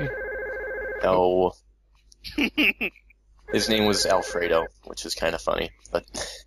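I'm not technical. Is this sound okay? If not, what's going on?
No. Imaging from linear upsampling runs through the whole clip. The sound was converted from a lower rate (16 kHz) to a higher one (44.1 kHz) by joining samples with straight lines. That dulls the top end and leaves a faint mirrored copy of the sound between 8 and 16 kHz, heard as a light metallic shimmer.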